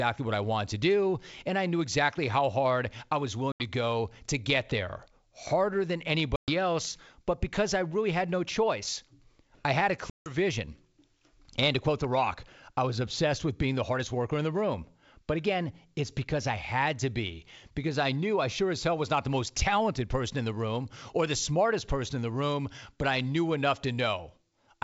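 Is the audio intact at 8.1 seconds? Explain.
Yes, the audio is intact at 8.1 seconds, with the speech passing through G.722 wideband telephone coding at 64 kbit/s as it should.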